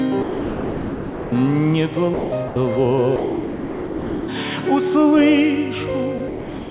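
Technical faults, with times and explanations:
0.22–1.32 s, 2.14–2.32 s, 2.48–2.56 s, 3.16–4.28 s, 6.18–6.20 s and 6.28 s to the end: sound dropped by the voice detector. The sound cuts out and flat comfort noise fills each gap. The likely cause is the sender's detector classing the sound as background and pausing transmission. The noise stays band-limited to 4 kHz like the rest of the telephone-band audio.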